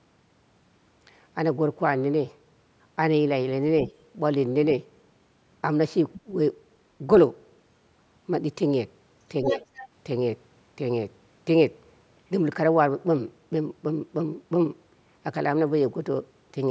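At 6.14–6.21 s and again at 9.48–9.87 s, far-end speech is heard: the other side's voice leaking through, roughly 20 dB and then 10 dB below the talker, likely residual loudspeaker echo the canceller missed. Inside the second leak, at 9.53–9.61 s, the talker's level dips by roughly 5 dB for about 70 ms, speech suppressed in double talk, likely the canceller attenuating both signals while both sides spoke.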